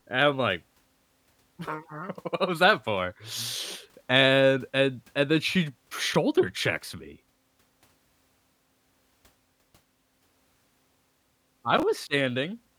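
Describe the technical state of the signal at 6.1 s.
At 6.11 to 6.16 s, between "and and then she" and "checks me", the speech has chunks out of order. One chunk of about 11 ms was delivered three chunks late, so it plays after audio that should follow it. Nothing is missing, but the sequence is scrambled. That leaves three hard joins in a span of about 40 ms. The result is a brief garbled moment.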